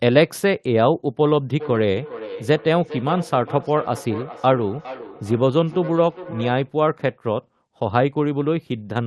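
From 1.51 to 6.79 s there's a feedback echo between two devices. Another device in the room replays the far end's audio and its mic sends it back, which this end's echo canceller can't remove. You get a trailing copy roughly every 0.4 s, peaking about 14 dB under the speech. The sound tops out near 12 kHz, in line with a call codec such as Opus at a modest bitrate.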